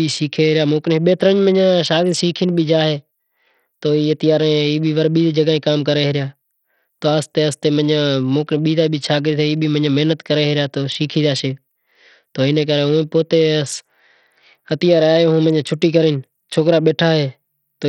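From start to finish, the speech carries heavy coding damage that sounds like Bluetooth SBC compression, likely from a starved bit pool, which fits a rate around 64 kbps. The top sub-bands get almost no bits, so the treble drops away or flickers in and out, while coarse quantisation leaves a gritty noise and aliasing riding on the sound. A spectrogram shows ragged, blocky gaps and on-off patches across the upper bands; the waveform looks unremarkable.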